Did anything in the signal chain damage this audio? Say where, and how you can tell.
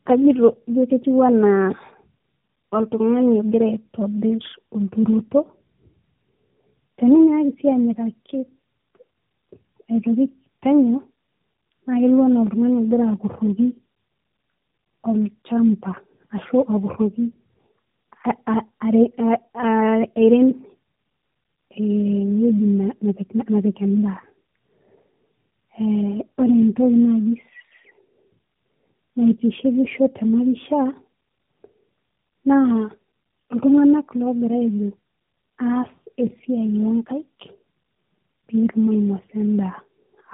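Yes, at the codec stage: tandem speech coding throughout. The speech sounds rough, warbly and muffled, with nothing above 3.8 kHz. G.729A at 8 kbit/s fed G.711 mu-law, then AMR-NB at 12.2 kbit/s re-encoded G.729A's errors, compounding them.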